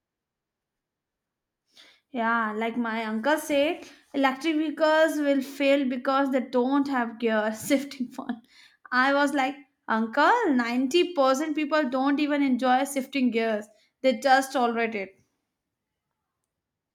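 No technical faults can be heard anywhere in this speech.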